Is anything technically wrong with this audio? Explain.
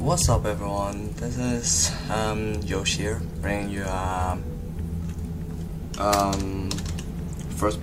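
No, nothing technically wrong can be heard here, as the signal stays intact and steady throughout with no audible defects.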